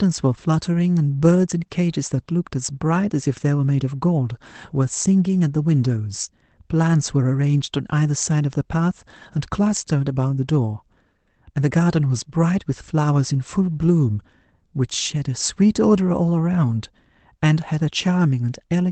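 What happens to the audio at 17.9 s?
At 17.9 s the speech runs through intact, with no dropout, glitch or other fault, just the steady character of the call codec carrying it.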